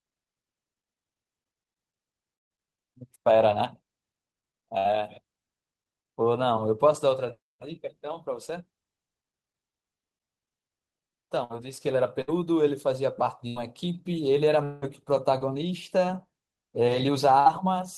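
A speech recording with packet loss faults. Bursts of packet loss occur at 2.35 to 2.52 s, 4.78 to 4.88 s and 17.40 to 17.49 s. Each time, a run of packets arrived too late or not at all. The receiver stretched the last sound and faded it out. About 120 ms of speech is lost at 2.35 s, where the patch fades to near silence. About 60 ms is lost at each of the other two. Repeated packet loss gives a robotic sound from 11.44 to 14.85 s. Four gaps fall in this stretch, the longest 180 ms. About 360 ms of speech goes missing in total. Patched sound fills about 11% of the span, so the speech turns choppy.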